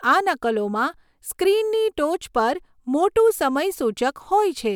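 No technical faults are audible.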